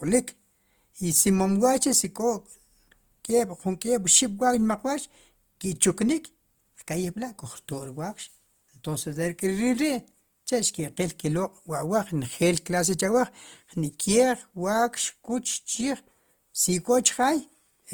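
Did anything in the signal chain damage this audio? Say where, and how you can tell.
Yes, at the codec stage. The damage runs through the whole speech clip rather than at one moment. Tonal parts of the sound turn grainy, rough and noisy, yet the spectrum stays full without obvious holes or swirling. The top end is still present. That points to likely Opus compression in its music mode, which fits a low bitrate around 24 kbps. Band energies are kept, but starved bands get filled with folded or noise content.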